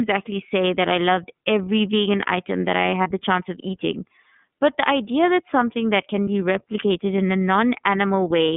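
From the start the whole clip runs through the iLBC codec. Everything above about 3.5 kHz and below 150 Hz is gone, and the speech has a plainly rough, slightly synthetic edge. The sound fits the 13.33 kbps mode with 30 ms frames.

At 3.03 s and again at 6.24 s you get lost iLBC frames. Each short gap, around 30 ms, is filled by the decoder repeating the last pitch cycle with some noise, so it comes across as a brief buzzy held vowel. The voice snaps back right after, since each frame decodes on its own.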